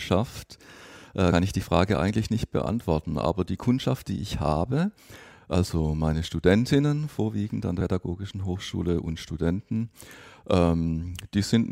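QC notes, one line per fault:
1.32 to 1.41 s, compressed frames skipped: the speech lurches forward just before "ich die", dropping around a tenth of a second of audio. Whole frames never got decoded, so the audio jumps ahead by their length.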